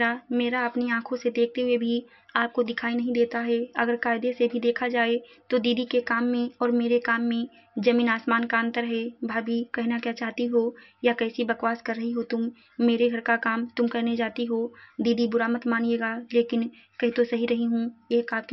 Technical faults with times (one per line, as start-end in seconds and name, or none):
none